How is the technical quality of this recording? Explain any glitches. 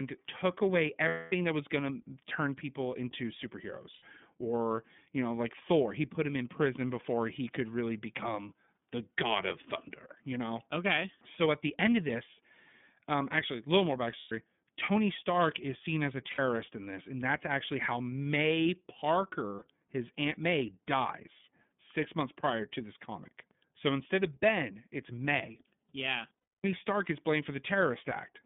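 Technical quality is fairly rough. The whole thing has gone through the iLBC codec, and there are six short dropouts where frames went missing.

The codec damage is plainly audible throughout. The sound is squeezed into a phone-style band of roughly 150 Hz to 3.5 kHz, so there's no air or sparkle on top. iLBC codes each frame's excitation on its own, and the result has a slightly gritty, synthetic edge. The roughness fits the codec's 30 ms frame mode at around 13 kbps.

The glitches are lost iLBC frames, at 1.08 s (about 240 ms), 3.93 s (90 ms), 14.18 s (120 ms), 16.31 s (60 ms), 19.56 s (60 ms) and 26.42 s (270 ms). When packets don't arrive, the decoder fills the hole by repeating the last pitch cycle with some noise mixed in. You hear that as a brief held, buzzy or breathy vowel, and it fades on the longer gaps at 1.08 s and 26.42 s. Because each frame stands alone, the sound snaps back almost immediately afterward.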